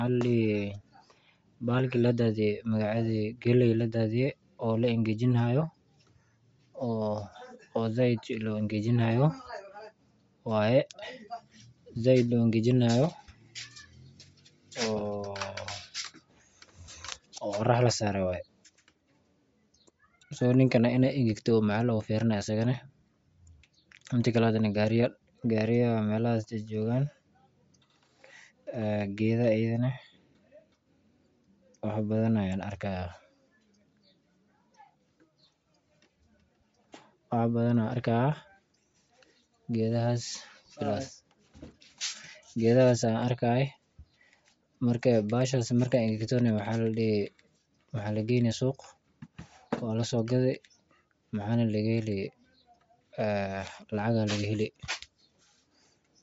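A speech clip, likely passed through Bluetooth LC3 compression at a low rate fitting 32 kbps throughout, leaving nothing above 7.7 kHz and a plainly breathy, grainy edge.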